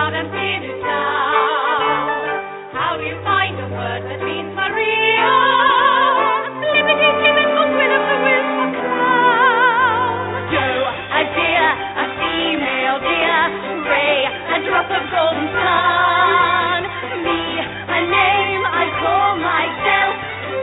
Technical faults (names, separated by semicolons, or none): none